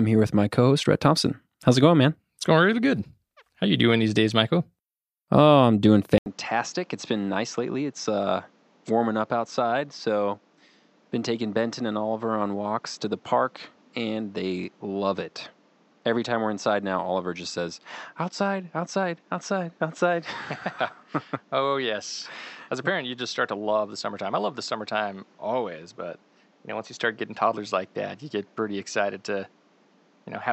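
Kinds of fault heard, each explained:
Input switched to a poorer device: at 6.18 s the recording's input likely moved from the original microphone to a lesser one, such as a headset in call mode. After a brief gap of about 80 ms, the speech comes back dull and boxy, with nothing above 7.9 kHz, roughly 10 dB quieter, and over a new background noise sitting some 35 dB below the voice. This narrowed, quieter sound continues to the end.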